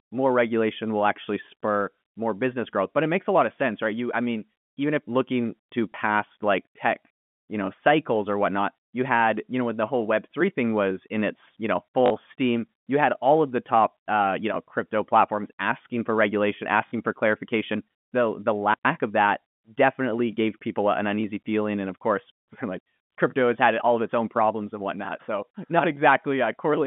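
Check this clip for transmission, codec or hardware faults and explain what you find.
Three brief packet-loss gaps with the last packet repeated, heard over the band-limited G.711 telephone path. They fall at 5.92 s, 12.06 to 12.10 s and 16.88 to 16.92 s. The first fills about 20 ms and the later two about 40 ms, which fits one and then two 20 ms packets. The receiver replayed the previous packet, so the 40 ms runs buzz near 50 Hz like a robotic stutter. They are not gaps of silence.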